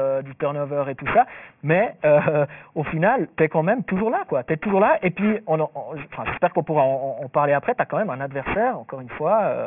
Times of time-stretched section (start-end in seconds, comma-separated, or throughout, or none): none